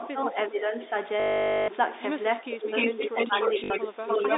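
Right at the start, from 0 to 0.92 s, the talker keeps sinking in level, dropping by around 10 dB for something like 400 ms in total in patches. That's speech suppressed in double talk, likely the echo canceller ducking this side because both people were talking at once and it couldn't tell the near voice from the loudspeaker echo.

Then from 1.2 to 1.68 s there's packet loss with the last packet repeated: 480 ms of audio is missing, and the gap is filled by replaying the same chunk over and over. It comes out as a robotic buzz around 50 Hz, which fits 20 ms packets.

Double-talk suppression hits again from 2.41 to 2.72 s, deeper this time at around 15 dB.

From 2.76 to 3.9 s you get an echo leak, with a copy of the voice coming back 297 ms late at a level roughly 5 dB relative to the talker, likely loudspeaker sound the far end's canceller failed to remove. Overlapping that, 2.96 to 4.09 s brings a longer stretch of double-talk suppression, again down around 15 dB for something like 700 ms in total.

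Inside that stretch, 3.64 to 3.7 s has another short repeated-packet stutter covering 60 ms.

From 4.09 s to the end the echo leak returns, about level with the speech.

All of this is heard through the narrow 300 to 3.7 kHz telephone band of the G.711 A-law coding.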